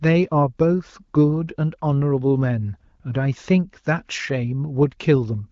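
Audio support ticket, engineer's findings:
No faults found; the AMR wideband (HD Voice) codec shows as a band edge near 7.6 kHz with only light coding texture on the speech, consistent with AMR-WB at around 16 kbit/s.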